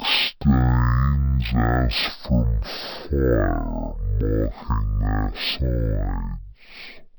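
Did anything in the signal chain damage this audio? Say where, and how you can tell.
Yes. At the format-handling stage, interleaved stereo was read as mono: alternating left and right samples were taken as one channel, so the speech plays throughout at half speed and a full octave low, with a faint mirror image of the sound in the upper half of the spectrum.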